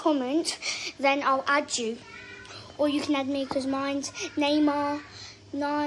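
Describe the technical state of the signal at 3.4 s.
At 3.4 s the signal is intact, with no dropout, distortion, glitch or other fault present at that point.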